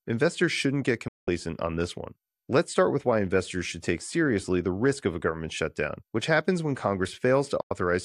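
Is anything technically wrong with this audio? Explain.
Yes. The speech has two digital broadcast dropouts, at 1.08 to 1.28 s and 7.61 to 7.71 s. The receiver stopped getting decodable frames and muted with a 3 ms fade, so the sound vanishes for 192 ms and then 96 ms, consistent with eight and four lost 24 ms frames.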